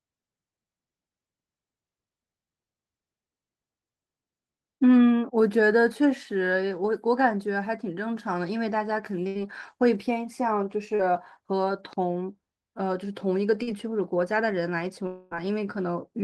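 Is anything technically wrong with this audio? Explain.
Yes, the speech has four packet-loss faults; the call path's coding band limit, visible as spectrogram energy stopping near 12 kHz, is expected rather than a fault.

Burst of packet loss, 9.27 to 9.38 s: about 80 ms never arrived, and the receiver extended the last sound as a fading buzz or hiss. It appears on a spectrogram as smeared energy before speech resumes.

Short concealed packet loss, 10.95 to 11.02 s and 13.63 to 13.70 s: roughly 40 ms each was synthesised from the preceding sound, heard as a brief smear or wobble. On a waveform, each shows as a short, overly regular stretch.

Long network dropout, 15.07 to 15.34 s: about 240 ms is missing, likely from a network outage. Concealment stretches the last sound into a decaying buzz or hiss, with no silence. A spectrogram shows a blurred band that fades before speech returns.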